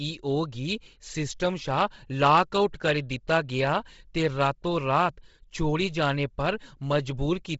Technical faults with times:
0.00-7.59 Bluetooth LC3 compression

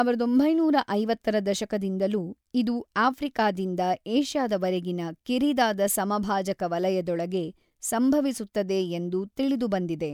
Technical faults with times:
none

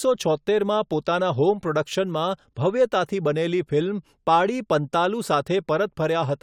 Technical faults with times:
none

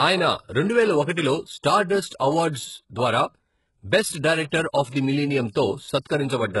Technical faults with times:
0.00-6.60 HE-AAC compression
4.49-4.52 pre-echo
4.89-4.94 pre-echo
6.04 pre-echo

